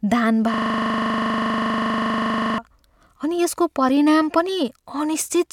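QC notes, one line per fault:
0.54 to 2.58 s, system hang loop. The same 40 ms slice of speech repeats about 50 times, which points to a stalled driver while the hardware kept replaying its ring buffer. The short loop sounds like a steady 25 Hz buzz.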